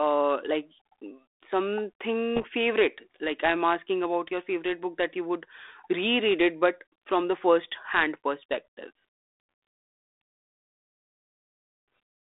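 From 2.36 to 2.45 s there are bit errors on the ADPCM link: flipped bits throw the decoder's step size off, giving a rough, poppy burst with jumpy level.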